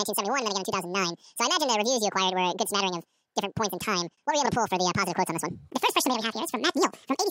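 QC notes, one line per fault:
Throughout: audio read two samples at a time (double speed). The speech plays at twice its proper rate and a full octave (12 semitones) high, because sample pairs are being consumed as single frames.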